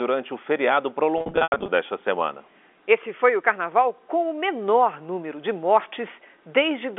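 Between 1.18 and 1.68 s, after "o feriado" and before "desta semana", there's packet loss with pitch repetition. About 320 ms of audio drops out in bursts up to 90 ms, patched with repeated pitch periods that sound buzzy and held.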